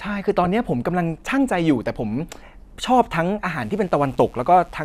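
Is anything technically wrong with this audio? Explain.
Yes, there are two faults.

From 0.44 to 0.47 s there is DAB burbling. Weak reception let bit errors, around one or two in a thousand, slip past error correction into the MP2 data. Corrupted samples put short noise blips into individual sub-bands, and corrupted scale factors make sub-bands lurch in level, giving a brief burble over the speech.

From 3.6 s to the end there is mains buzz. Sharp switching spikes from a dimmer, rectifier or unshielded path enter twice per 60 Hz cycle, spraying harmonics up into the kilohertz range. This produces a steady, raspy buzz about 35 dB below the speech.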